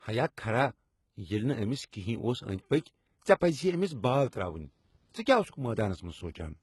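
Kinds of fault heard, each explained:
HE-AAC compression: Heavily damaged treble, gritty and metallic, with nothing above 11.8 kHz. It is likely band replication at a low bitrate near 16 kbps; on a spectrogram, upper bands look copied and smeared.
Pre-echo: A short hiss of about 31 ms, from 1.90 to 1.93 s, precedes a sharp attack and softens it. On a waveform, low noise rises just before the transient.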